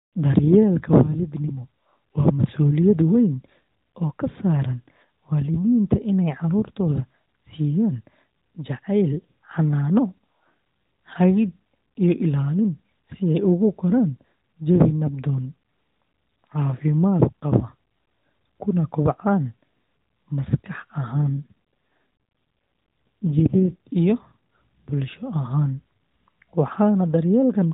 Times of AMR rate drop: 21.12-23.77

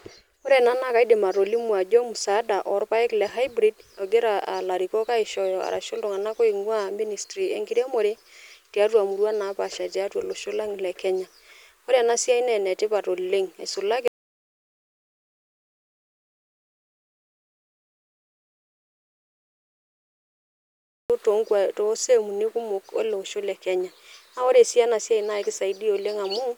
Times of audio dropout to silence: 14.08-21.10

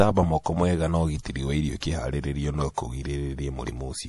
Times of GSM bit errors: none

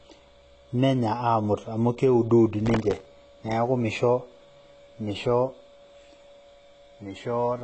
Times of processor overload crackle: 2.66-3.05

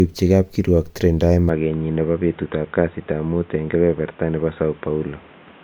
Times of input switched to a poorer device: 1.49-5.63

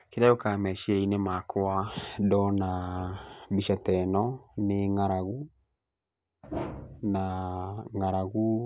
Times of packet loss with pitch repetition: none

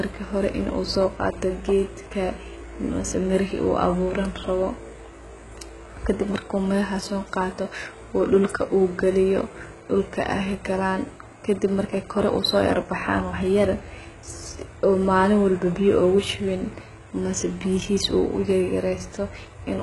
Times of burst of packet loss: none

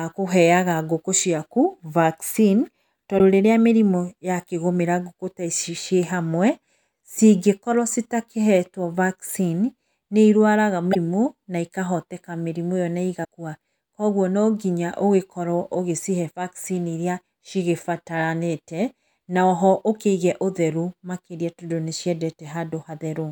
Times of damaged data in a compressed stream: 3.15-3.20, 10.91-10.96, 13.21-13.25

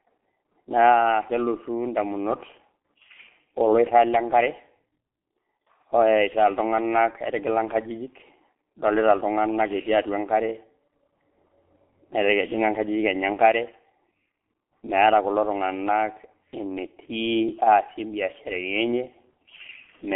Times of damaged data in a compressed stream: none

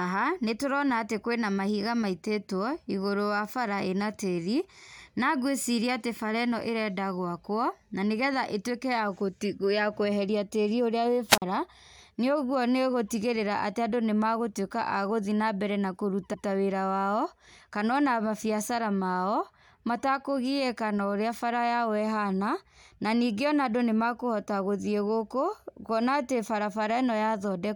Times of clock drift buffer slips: none

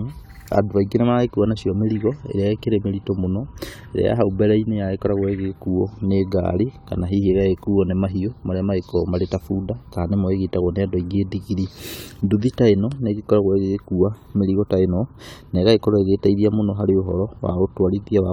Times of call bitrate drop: none

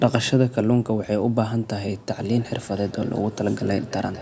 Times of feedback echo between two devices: 2.30-4.21

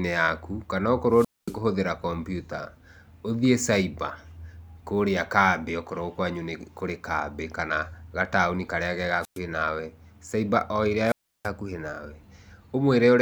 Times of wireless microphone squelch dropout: 1.11-1.58, 9.21-9.39, 11.05-11.49

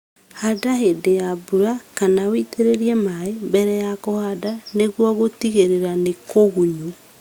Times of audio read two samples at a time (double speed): none

